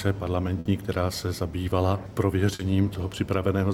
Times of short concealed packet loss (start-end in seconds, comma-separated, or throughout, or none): 2.55-2.61